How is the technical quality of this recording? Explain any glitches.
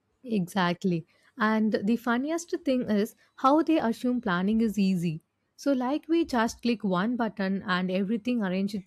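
One glitch stands out: audio missing between chunks at 6.29 s, between "easy so like we" and "click one button". The recorder likely works in 2.5-second chunks and lost a few milliseconds at one handover. The two sides join with no gap, heard as a brief skip.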